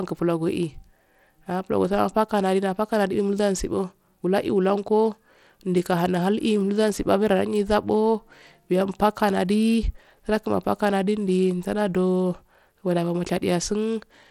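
Bluetooth SBC compression runs throughout the speech: nothing above 16.8 kHz, flickering, gritty treble, likely from coarse SBC sub-band quantisation at around 96 kbps.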